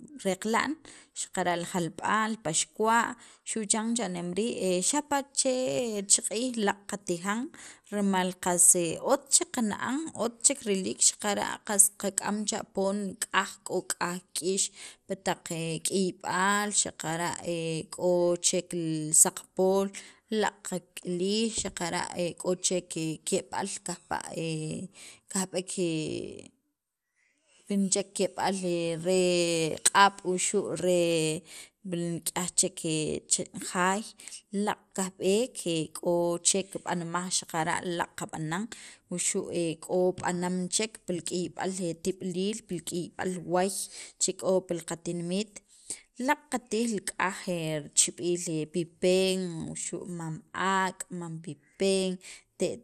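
A speech recording, likely passed through MP2 compression at a starved bitrate, fitting around 80 kbps, so the encoder shuts off upper sub-bands and coarsely quantises the rest. Nothing sounds above 15.1 kHz, and throughout the clip the speech is dulled, with a plainly audible gurgling, granular texture.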